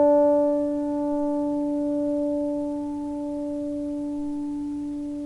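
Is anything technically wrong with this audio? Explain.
No, the recording of everyday sounds has no audible technical faults.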